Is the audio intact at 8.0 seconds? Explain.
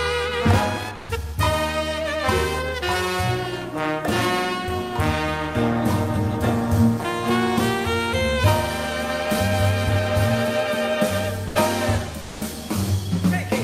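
Yes, the audio at 8.0 seconds is intact, with nothing there to break the sound.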